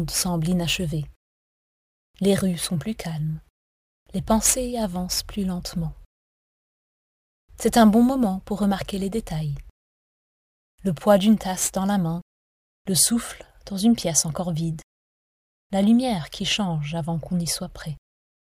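Crude rate conversion runs from 0 to 12.89 s: samples are repeated without filtering, which fits a 32 kHz to 44.1 kHz change, so a patterned error roughly 20 dB below the signal adds a gritty, inharmonic fizz that tracks the loud and high sound.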